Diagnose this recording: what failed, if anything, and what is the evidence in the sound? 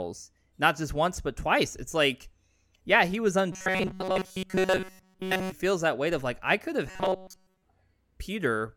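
The speech turns into a rigid, metallic buzz pitched near 188 Hz from 3.52 to 5.52 s, starting right after "like yeah he was" and ending before "feels that weight of". It returns from 6.90 to 7.65 s after "like I could have", where the buzz replaces the sound entirely rather than mostly. This is robotic sound from repeated short buffers, likely a driver or buffer underrun. The software loops the last fragment of about 5.3 ms, which fixes the pitch.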